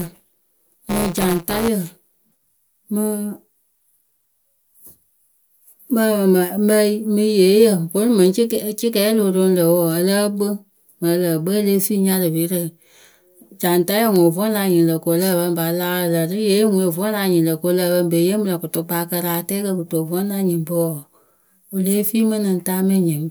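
From 0 to 1.68 s the speech carries buffer tearing. The writer and reader of a ring buffer have slipped. Each period repeats a small slice of audio about 10 ms old. A robotic buzz near 172 Hz results, which fits a 256-sample buffer.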